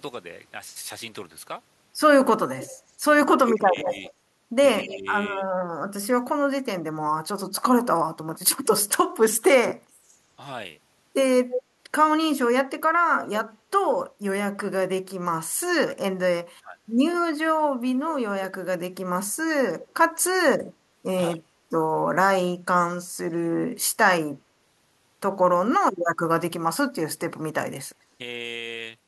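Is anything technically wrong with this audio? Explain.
Yes. There is an echo leak at 2.54–4.82 s, 11.5–11.62 s and 19.8–20.64 s: a copy of the speech returns after roughly 170–190 ms, fairly loud in the first two and faint in the last. This is likely uncancelled loudspeaker pickup at the far end. Unlike reverberation, it is a distinct repeat rather than a smooth decay.

Speech is also suppressed in double talk at 3.36–5.45 s, 16.51–16.78 s, 20.44–21.49 s and 25.72–25.96 s. The voice dips by about 20 to 35 dB in pieces, likely because the echo canceller mistook overlapping talk for echo. Unlike a dropout, only parts of the speech are ducked, and this happens only while the two sides overlap.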